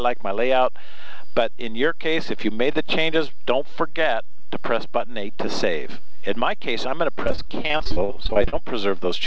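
From 7.24 to 8.54 s, repeated packet loss makes the sound choppy and robotic. About a third of that stretch is concealed by stretching the last sound across short holes, the longest about 47 ms. Unlike a single dropout, the holes recur in quick succession, over a band already limited to 8 kHz.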